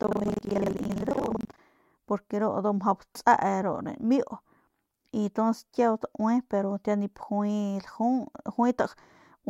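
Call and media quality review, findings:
Buffer tearing, 0.00 to 1.62 s. Symptom: robotic buzz on the speech at about 23.4 Hz, present only while signal is present, clearing after 1.62 s. Probable component: playback ring buffer, writer and hardware reader out of step. The rate fits a 2048-sample buffer. Mechanism: the pointers cross within each period, so roughly 40% of every buffer replays audio about a tenth of a second old, with hard joins at both ends.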